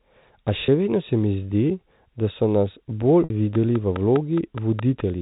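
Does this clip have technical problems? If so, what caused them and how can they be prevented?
Yes. At 0.66 s there is a brief buzzy hold of about 20 ms, and from 3.24 to 3.30 s a longer 60 ms one that fades toward silence before the audio cross-fades back in. This is packet loss with pitch repetition. The receiver bridged each gap by repeating the last pitch period. The first gap fits a single lost 20 ms packet and the second fits about three. A jitter buffer with forward error correction, or a more reliable network path, would prevent these gaps.

From 3.55 to 5.01 s a regular ticking runs through the sound, about 4.8 clicks per second and around seven in all. Each click peaks roughly 10 dB above the signal and is audible in the pauses too. This train of clicks likely comes from electrical interference or a faulty connection or power supply injecting near-identical pulses. Shielding and separating cables from nearby equipment, and checking connections and the power supply, would prevent it.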